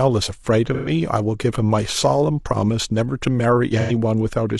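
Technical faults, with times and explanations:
0.74–0.89 s and 3.80–3.92 s: AAC frame loss with concealment. Two short dropouts of about 0.13 s and 0.09 s, consistent with three and two lost frames. The decoder rebuilds each gap from the last good spectrum, so the speech briefly turns smeared, noisy and phasey instead of falling silent.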